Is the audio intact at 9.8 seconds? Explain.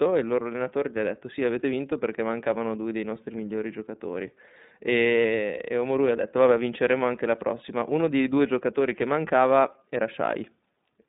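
No. At 9.8 s, as throughout the clip, the speech carries iLBC codec damage. The codec rebuilds each 30 ms frame's excitation independently, leaving a plainly rough, synthetic texture consistent with its 13.33 kbps mode. The band is narrowed to a telephone line of roughly 150 Hz to 3.7 kHz. On a spectrogram, energy stops at a hard ceiling near 3.8 kHz with empty space above, and the lowest band below 150 Hz is thinned out.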